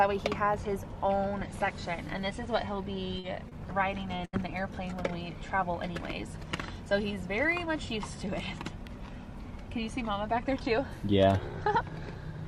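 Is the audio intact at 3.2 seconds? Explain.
No. From 3.19 to 3.25 s there is a short concealed packet loss. About 40 ms of audio never arrived at the decoder in time. The receiver covered the gap with roughly 38 ms of substitute sound. It extended the last sound it had, either at its pitch or as shaped noise, and then faded back into the real signal. The result is a brief smear or wobble at that point, where a short sound may drop out.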